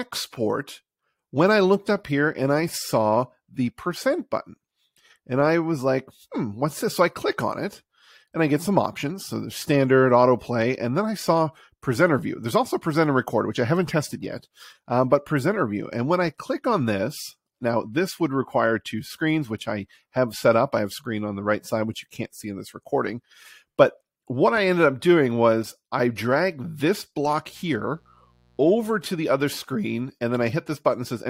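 A steady, raspy buzz appears from 27.46 s to 28.96 s, faint and sitting roughly 40 dB below the sound. This is mains buzz: spiky interference at twice the 60 Hz mains frequency, with harmonics stretching into the kilohertz range, leaking in from switching electronics or poor shielding.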